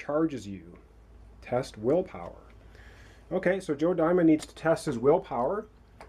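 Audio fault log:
4.39–4.46 s, corrupt frame decoded: a short chirp-like burst where a few damaged compressed frames were decoded as if valid, with misread gains and codes scattering energy into the wrong frequencies, peaking somewhere around -25 dBFS. A spectrogram shows a brief smear across unrelated bands; the waveform shows a small glitchy blip.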